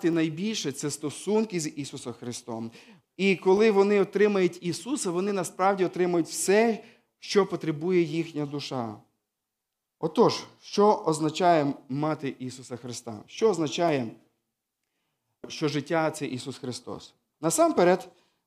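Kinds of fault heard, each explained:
Clock drift buffer slips: two devices likely ran on separate clocks about 200 parts per million apart, so the buffer between them drifted until a block of roughly fifteen samples was dropped or repeated, heard as a click every 1.72 s, about ten in all.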